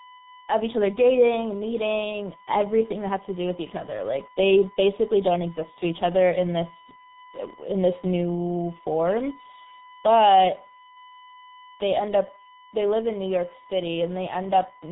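A steady, fixed-pitch tone at 1 kHz sits well below the speech for the whole clip. This is USB whine, where the bus's 1 ms frame activity leaks into the audio through power or ground. Throughout, the speech also sounds heavily muffled and hoarse, with smeared consonants and nothing above 3.8 kHz. This is G.723.1 codec damage, and the sound points to a very low rate near 6 kbit/s.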